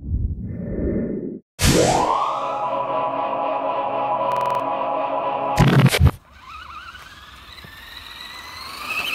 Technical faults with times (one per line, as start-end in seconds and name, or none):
4.32-4.60 system hang loop